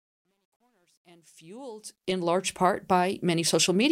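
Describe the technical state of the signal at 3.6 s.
At 3.6 s the speech signal is intact, with no audible fault at that moment.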